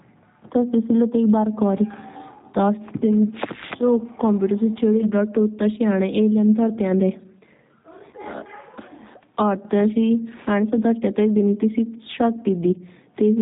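From the first moment to the last, the speech carries G.729 codec damage. The sound suggests the G.729A variant at a rate around 8 kbit/s. It rebuilds each short frame from a vocal tract filter, a pitch predictor and a few pulses. Everything above 4 kHz is gone. The voice sounds dull, slightly rough and synthetic. The damage is plainly audible.

At 8.11 s comes a dropout concealed by the speech codec. It lasts until 8.16 s. The gap fits a single lost 20 ms VoIP packet. The decoder filled it by repeating its last pitch and filter at falling gain. That gives a brief stretched smear that fades. The voice stays weak for a moment after. The same packet loss concealment returns from 12.41 to 12.45 s. It also fits one lost 20 ms packet and has the same stretched, fading sound.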